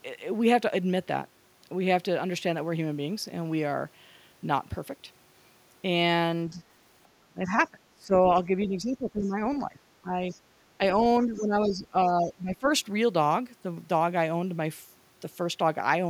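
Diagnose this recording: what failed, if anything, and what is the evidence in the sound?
The failure is in call processing, where the echo canceller likely mishandled double talk, giving speech suppressed in double talk. The speech level dips at 6.5 to 6.62 s by about 10 dB, at 7.11 to 8.27 s by about 20 dB, at 8.66 to 10.16 s by about 15 dB, and at 11.25 to 12.66 s by about 15 dB. The canceller attenuated the near talker along with the echo.

Brief scraps of the other side's voice leak through at 9.21 to 9.25 s, 10.31 to 10.4 s and 11.36 to 11.4 s, about 25 to 30 dB below the speech. This likely comes from loudspeaker echo that the canceller did not fully subtract from the microphone signal.

The background is gated by the echo canceller at 10.45 to 10.49 s. The room sound drops by about 10 dB for roughly 40 ms and then returns. Suppression clamped the microphone path while far-end audio was playing, then released.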